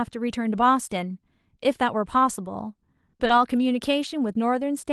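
Right around 3.09 s the speech hits a rough patch. First comes short concealed packet loss: about 40 ms starting at 3.09 s, then another 20 ms at 3.17 s, and a third 20 ms at 3.27 s. Each time the audio never reached the decoder in time, so the receiver stretched the last bit of sound across the hole and blended back into the real signal. You hear it as a quick smear or wobble, and a short consonant can drop out.

Threaded through that same stretch is a lost packet rebuilt from error correction, at 3.21, 3.29, 3.37, 3.41 and 3.55 s, each about 20 ms. Those packets went missing too, but the following packet carried a low-bitrate backup copy, which the Opus decoder played instead. So there's no gap, just a brief patch that sounds grainier and noisier than the speech around it. This is layered over the usual coding texture of the call path, whose bandwidth tops out around 12 kHz.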